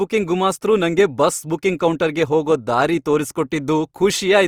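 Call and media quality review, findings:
Speech grainy, rough, noisy throughout; content reaches 20.3 kHz. Likely Opus compression, low bitrate: band energies kept, starved bands filled by folding or noise.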